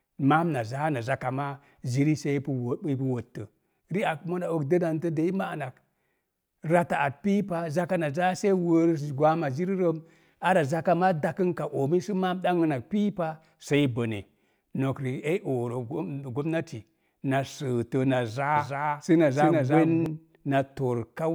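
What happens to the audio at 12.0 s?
Nothing goes wrong at 12.0 s: the speech carries on intact through that moment, with no dropout, click, distortion or other fault.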